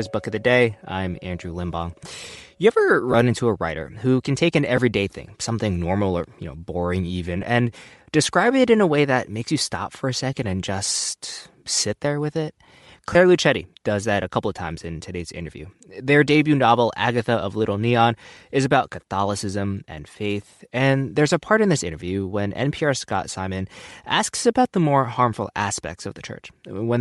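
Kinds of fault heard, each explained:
Bluetooth LC3 compression: The likely cause is the LE Audio transform codec coding at a modest rate, consistent with about 48 kbps in 10 ms frames. It discards much of the upper spectrum and fills it with noise, giving the speech a plainly audible breathy, grainy edge throughout.
Lost LE Audio frames: Frames dropped from the link, and the decoder covered each gap by reusing the previous spectrum with scrambled signs. This gives brief noisy smears of 10 to 20 ms at 3.12 s, 4.77 s, 7.42 s and 13.13 s, the first just before "into a writer who".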